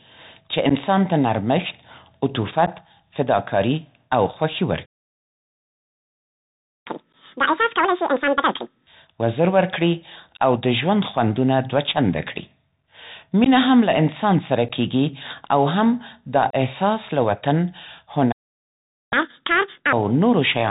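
Throughout the clip the speech travels over a Bluetooth CVSD headset codec, a one-bit delta modulator whose adaptive step often lags the waveform. Everything above 4 kHz is gone, giving a narrow telephone band. Loud, bright passages overshoot the step and distort, sibilants turn scratchy, and a fine granular hiss sits under the speech. The damage is plainly audible.

Unconcealed Bluetooth headset packet loss strikes first at 0.69 to 0.72 s, just before "ته نرمښت", and again at 2.66 to 2.68 s, just before "فداکاري او خوښي". Each time, around 11 ms of voice packets between headset and phone never arrived, and silence or an idle pattern filled the gap. The result is a tiny hard-edged hole, with the speech returning briefly softer as the CVSD step rebuilds.

At 4.85 s the output goes dead for 2 s, until 6.87 s. This playback stall is likely caused by the player running dry of data or its thread being blocked. 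The speech halts abruptly mid-flow, leaving a clear, unnatural gap before it resumes.

Immediately after "فداکاري او خوښي", from 6.87 to 8.87 s, the player works off its backlog through catch-up at higher speed, resampling to 2x. Speech rushes by at double tempo with pitch raised by roughly ten semitones, giving a chipmunk quality.

Further packet losses follow, each pointing to a handful of missing packets: a 12 ms hole at 7.13 s inside the sped-up stretch, 13.44 to 13.48 s, 14.69 to 14.71 s, and the longest at 16.50 to 16.56 s, lasting 30 ms.

A second stall, again likely from data starvation, silences the output from 18.32 to 19.13 s, about 0.8 s. It is followed by another 2x catch-up from 19.13 to 19.93 s, shorter than the first, with the same hurried, high-pitched delivery.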